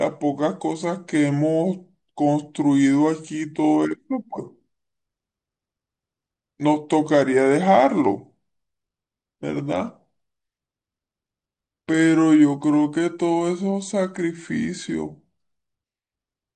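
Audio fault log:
Throughout: wrong sample rate. The speech runs at about 0.73 times its proper speed and sits roughly 5.6 semitones low, so it sounds slow, heavy and drawn out. Speed and pitch shift together, which fits audio captured at 44.1 kHz being played back at 32 kHz with no conversion. On a spectrogram every harmonic and formant sits proportionally lower and the content stops short of its proper top; the waveform looks stretched in time.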